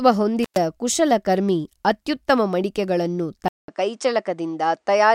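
An intermittent contact fault appears between 0.43 and 0.58 s: a loose connection briefly opens, and the speech drops out for about 116 ms, with crackle at both edges where the contact breaks and remakes, and faint hiss while the line is open.

An input switched to a poorer device follows at 3.48 s and lasts to the end. After a 200 ms silence, the speech returns duller, with nothing above 9.8 kHz. That narrower band most likely comes from the system changing to another microphone or a headset's call profile. The level stays roughly the same, with a new, faint background noise well below the speech.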